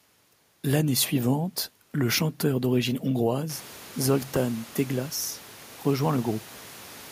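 No technical faults are present.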